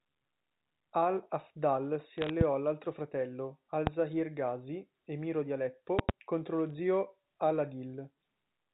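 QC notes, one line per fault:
2.18–2.30 s, bit errors on a digital phone line: a short patch of sharp ticks over the speech, as flipped bits at a fraction of a percent wreck individual samples.
2.41 s, loud pop: a single sharp pop roughly 20 dB above the speech, likely a plug, switch or static spike added to the line.
3.87 s, loud pop: the same single hard pop at around 20 dB over the speech, speech carrying on underneath, likely an electrical transient.
5.99–6.12 s, loud pop: two pops in quick succession, again around 20 dB hot, likely a switch or driver glitch kicking the signal twice.
6.66–6.74 s, bit errors on a digital phone line: a brief crackle burst as a few corrupted samples land on sign or high bits of the G.711 A-law stream.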